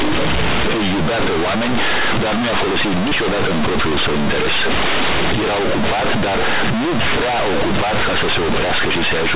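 From start to finish the speech suffers from companded audio read as linear: mu-law bytes are played as plain 8-bit samples without expansion, so every sign change swings across half the range. Quiet passages blast as loudly as peaks, with harsh buzzing and loud noise filling pauses. Unlike ordinary clipping, which flattens only the loudest moments, this distortion is just as severe in the softest sounds. The G.711 telephone coding beneath it still caps the band at about 4 kHz.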